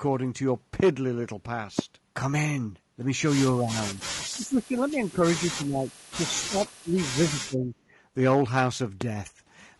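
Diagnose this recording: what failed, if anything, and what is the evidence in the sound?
At the codec stage, the whole speech clip sounds rough and grainy, with noise filling the gaps between harmonics and a thin, synthetic top band. This is likely low-delay AAC compression near 32 kbps. Its short frames smear pitch detail, and a steady texture like this points to the codec rather than the network.

On the analogue wiring or the driver, there are loud pops at 0.80–0.82 s, 1.79–1.81 s and 9.01–9.04 s, each a single sharp click roughly 15 dB above the speech. They likely come from a voltage step or pulse added to the signal. The speech carries on unbroken underneath, which distinguishes them from dropouts or buffer gaps.

In call processing, the speech is likely suppressed during double talk at 3.52–4.01 s, 4.32–5.25 s, 5.47–5.90 s, 6.14–6.59 s, 6.83–7.00 s and 7.18–7.74 s. Level dips of about 15 to 25 dB come and go in pieces. 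These are gain ducking by an echo canceller unsure of the far end, and the uneven dips rule out clean packet-loss gaps.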